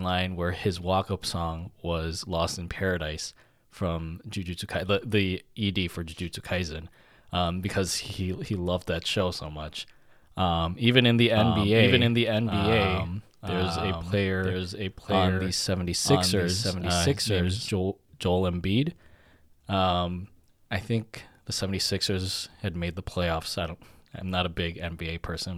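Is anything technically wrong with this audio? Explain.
Yes. From 11.37 s to 17.71 s, just after "even in the", there is a doubled audio track. The likely cause is the speech being captured a second time through a slower path, or an edit leaving two copies out of step, so both get mixed together. The result is a full-band second copy of the speech trailing about a second behind, roughly 5 dB quieter, with no decay or room colour. It cuts in and out abruptly at both ends.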